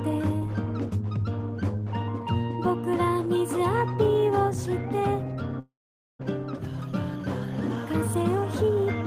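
At 5.59 s the audio breaks off and does not return properly until 6.23 s. What is heard fits a long network dropout, likely from packets failing to arrive over that stretch. The receiver extends the last sound as a fading buzz for a short moment, then roughly 480 ms of near-silence follows. When the sound resumes, about 400 ms of it is simply gone, and playback picks up further along rather than where it stopped.

From 7.75 s to 8.86 s the audio runs noticeably hurried while keeping its pitch, which is the signature of a jitter buffer speed-up. Having built up excess delay, the receiver trims short pitch-period-length pieces repeatedly to drain the buffer, playing at about 108% speed. Around a tenth of a second of material is cut out over that span, so the pacing feels rushed before settling.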